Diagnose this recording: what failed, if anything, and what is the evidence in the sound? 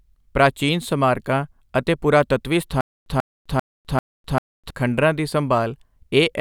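From 2.81 to 4.70 s the speech locks into a stutter with silent gaps: a burst of about 140 ms plays, then dead digital silence of about 254 ms, and the cycle repeats four times at an even 394 ms pace. The stage is most likely playback or the streaming buffer. Each time it ran dry, it replayed its last fragment and then emptied again, so the speech that belonged in that stretch never arrives.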